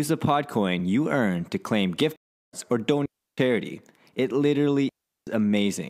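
At 2.16 s, just after "earn to claim gift", a stream reconnect occurs. The connection broke and the player restarted its decoder mid-stream, so the speech falls silent for about 0.37 s until 2.54 s and resumes roughly a third of a second further on, skipping that stretch. Twice afterwards a digital wireless dropout occurs: the radio link lost too much data and the receiver muted quickly, leaving clean near-silent holes from 3.06 to 3.38 s (0.32 s) and from 4.89 to 5.27 s (0.38 s), with no noise burst at either edge.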